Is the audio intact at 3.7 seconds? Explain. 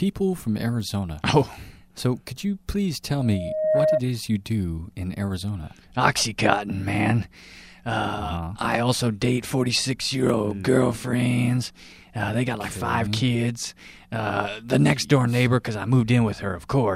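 No. From 3.18 to 4.02 s a loudspeaker feedback squeal at 622 Hz takes over: the microphone re-captures its own loudspeaker until that one frequency runs away. Unlike a steady hum or whistle, it swells over about half a second, ending roughly 5 dB above the sound.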